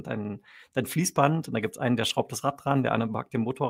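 A lost packet rebuilt from error correction occurs from 2.09 to 2.11 s. The decoder filled the 20 ms span, which fits a single lost packet, with the low-bitrate copy carried in the next packet, so the speech continues without a gap but briefly turns rougher and noisier.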